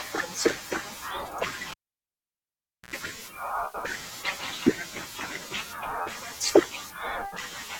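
Cable pulled and plugged in at 1.71 to 2.94 s in this speech recording: a pop, 1.18 s of near silence, an 82 ms burst of 60 Hz mains buzz while the plug tip touches, then another pop as sound returns.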